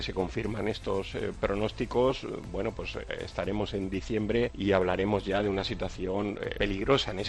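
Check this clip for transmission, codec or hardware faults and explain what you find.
Nothing stood out on listening; there was no point in the clip where the audio broke, changed character or drew attention to itself.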